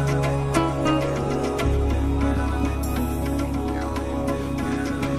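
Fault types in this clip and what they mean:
No technical faults can be heard in this clip. There is nothing here to list under any fault type.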